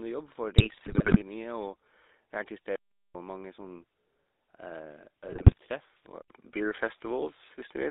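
GSM full-rate codec coloration runs through the whole of this speech recording, passing only about 250 Hz to 3.7 kHz, which fits the 13 kbps full-rate coder. Its regular-pulse excitation, which keeps only a sparse set of excitation samples, leaves the voice plainly buzzy and gravelly. GSM bit errors strike from 0.58 to 1.22 s and again from 5.28 to 5.58 s. Corrupted filter, pitch and gain parameters reach the decoder, so frames come out with warped spectra or sudden level jumps, and the speech breaks into squawks, pops and gargling. An input switch to a poorer device is the likely cause of the change at 6.22 s. After a gap of about 80 ms, the sound continues to the end with a different tone and a level shift of around 5 dB, and a faint new noise floor roughly 50 dB down.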